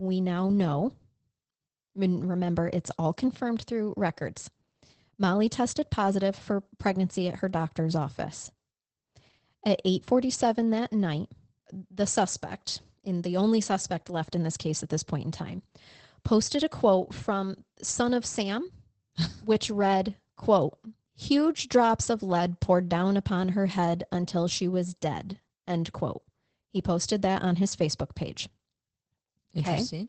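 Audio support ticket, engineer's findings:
Speech muffled and hoarse, faintly robotic, throughout; no content above about 8.5 kHz. Opus voice compression, SILK mode, wideband. Linear-prediction coder with coarse excitation, band capped near 8 kHz; damage level fits a bitrate around 12 kbps.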